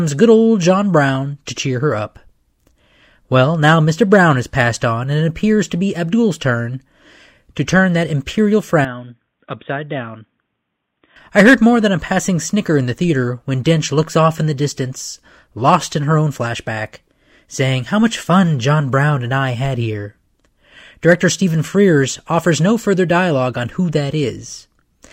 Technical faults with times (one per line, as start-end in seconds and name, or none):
8.85-11.16 input switched to a poorer device